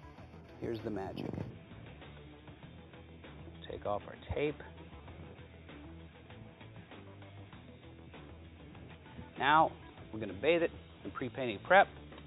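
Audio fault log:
0.00–1.50 s, imaging from linear upsampling: the top is dulled, and faint mirrored copies from about 4 to 8 kHz, roughly 30 dB down, add a light metallic shimmer. Straight-line interpolation from what sounds like an 8 kHz rate leaves images above the band, unlike aliasing, which folds content downward.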